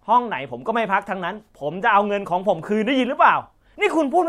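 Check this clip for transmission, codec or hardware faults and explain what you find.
No transmission, codec or hardware fault can be heard anywhere in this speech recording, and the signal holds steady throughout.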